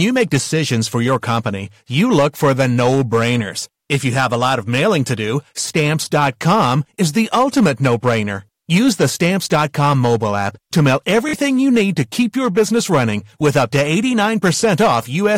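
Throughout, loud peaks crackle with a harsh edge. This is hard clipping: the signal runs about 7 dB past the limit, flattening a small share of peaks. A steady 46.9 Hz buzz also runs throughout, with no audible change in tempo. This is a truncated block size mismatch: each block's tail is discarded, which fits 1024-sample blocks. From 11.29 to 11.33 s, between "mobile app to mail" and "you need", a brief machine-gun stutter occurs. This is Bluetooth stutter: about 46 ms of audio went missing, which fits two lost packets, while the last buffer replayed.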